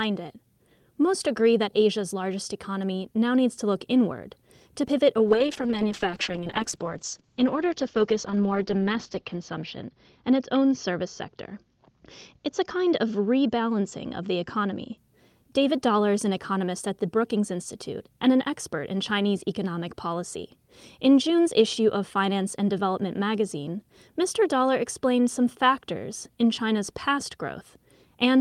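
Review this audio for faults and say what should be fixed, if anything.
A call bitrate drop runs from 5.29 s to 15.03 s. The speech turns rough and muffled. The top end closes in from 20 kHz to 8 kHz. The coarseness fits the encoder being pushed from about 32 kbps down to about 8 kbps. It stays at its worst for about 3.9 s before recovering. A falling bandwidth estimate starved the Opus encoder. To prevent it, tune congestion control to react less sharply and set a sensible bitrate floor.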